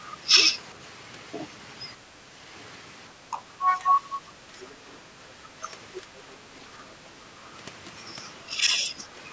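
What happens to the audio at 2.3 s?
The speech dips briefly in level from 2.26 to 2.31 s, about 50 ms. The drop is shallow, around 5 dB at its deepest, and the level recovers right after. This is likely speech suppressed in double talk. When both ends of a call talk at once, the echo canceller can mistake the near talker for loudspeaker echo. It then turns the microphone signal down. Here that costs the talker a short, slight fade.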